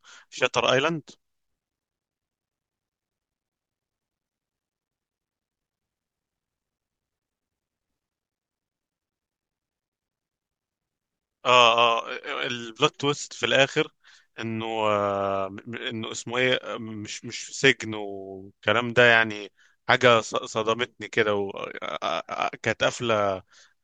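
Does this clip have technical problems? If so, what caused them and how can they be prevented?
No, there are no technical problems to hear in this speech recording. With nothing at fault, there is no cause to trace and nothing that needs preventing.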